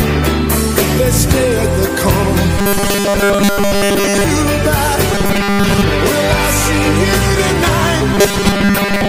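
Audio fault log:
2.58–4.24 s, 5.12–5.84 s and 8.14–9.08 s: robotic sound from repeated short buffers. New audio likely arrived too seldom, so a 5 ms block was replayed to fill most of each stretch while fresh audio was skipped, stamping a rigid, metallic 200 Hz buzz over the sound.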